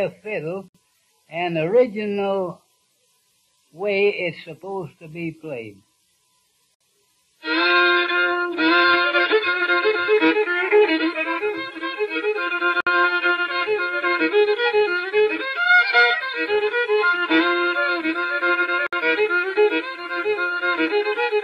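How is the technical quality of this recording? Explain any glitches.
The recording has one recurring glitch: a gap at a join of encoded pieces, at 0.68, 6.75, 12.81 and 18.87 s. Separately encoded chunks were joined untrimmed, leaving their start delay and end padding in, so the sound drops out for about 60 ms every 6 s and then carries on.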